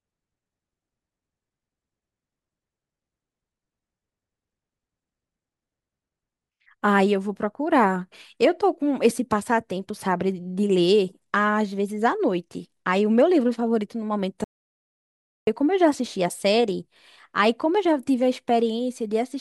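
Speech, with one audio dropout to silence from 14.44 to 15.47 s. The sound cuts off mid-flow and returns after about 1.03 s. The gap is silent, with no room tone. The cause is likely a lost input link while recording continued.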